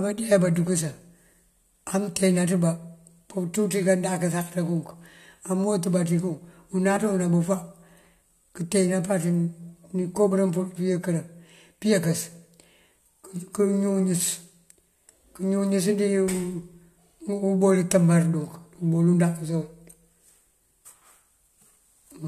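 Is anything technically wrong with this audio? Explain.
Yes, compressed frames are skipped three times: at 6.95 s, just after "mëwët bá ţí kun", then at 8.21 s and 10.30 s. Whole coded frames go unplayed, either missing from the file or rejected by the decoder as damaged, so the speech jumps ahead by roughly one frame (about 20 ms) at 6.95 s and 10.30 s, and roughly two frames (about 40 ms) at 8.21 s. The gaps fit a frame length near 21.3 ms. Each jump is heard as a brief discontinuity at the join.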